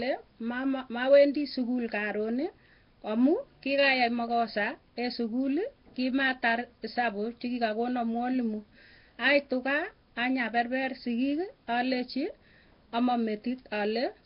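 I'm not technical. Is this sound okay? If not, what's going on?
No. From start to finish the speech sounds rough and hissy, with a smeared, underwater quality, and the damage is heavy. The top end is missing too, with nothing above 5.3 kHz, so it sounds dull. This is likely Nellymoser compression, the old Flash microphone codec. It squeezes sound into very few bits, gives quiet parts of the sound none at all, and fills those gaps with noise, which creates that fizzy haze.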